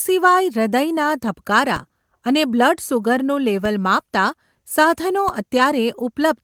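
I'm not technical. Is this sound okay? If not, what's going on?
No. At 1.76, 3.65 and 5.29 s a DC step occurs: the signal's resting level suddenly jumps and then slowly settles back. Each jump is a low thump while the speech continues.

At 5.57 s there's a lost packet rebuilt from error correction: a tiny piece went missing and was filled from a rougher backup copy. That brief moment sounds rougher and noisier, but there's no gap.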